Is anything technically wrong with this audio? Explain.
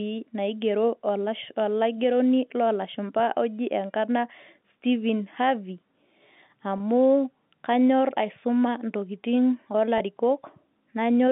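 Yes, there are two quick packet loss with pitch repetition blips, at 6.78 s and at 9.98 s right after "kanyorr aisuma ntokitin". Each loses about 20 ms, consistent with one dropped packet. The receiver repeats the last pitch period to cover it, giving a brief, slightly buzzy hold.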